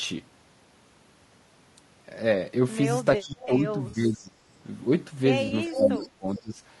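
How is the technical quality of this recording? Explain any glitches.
Quality is compromised: the speech carries codec damage throughout, plus dropouts, echo and concealment glitches in the second half.

Low-delay AAC compression runs through the whole clip, likely AAC-ELD at a rate that fits about 32 kbps. Short frames blur pitch harmonics, so voices sound rough and grainy. A spectrogram shows noise filling the gaps between harmonics.

Speech suppressed in double talk occurs from 3.17 to 4.47 s and from 5.66 to 6.59 s, likely an echo canceller ducking overlapping talk. The voice dips roughly 15 dB, then 20 dB, visible as waveform troughs.

Echo leak appears at 3.41 to 3.46 s, about 20 dB down, and at 5.74 to 5.96 s, near speech level. It is likely residual loudspeaker pickup returning a 0.42 s delayed copy, seen as a duplicated pattern.

AAC frame loss with concealment hits at 3.89 to 3.95 s and 5.47 to 5.53 s, each 40 ms, which fits two lost frames. 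Decoder fill-in sounds smeared and phasey, with blurred spectrogram columns.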